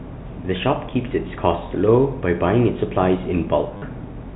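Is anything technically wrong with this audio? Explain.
Yes. From 3.77 to 3.82 s the speech breaks into a brief robotic stutter with a buzz near 100 Hz. This is packet loss with the last packet repeated: 50 ms went missing, which fits five 10 ms packets replayed out of step with the pitch.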